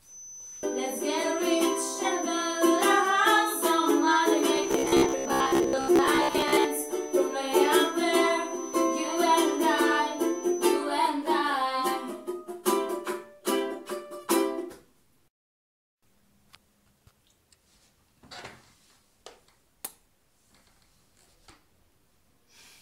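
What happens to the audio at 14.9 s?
Nothing goes wrong at 14.9 s; the audio plays through that moment intact, with no dropout, click, distortion or other fault.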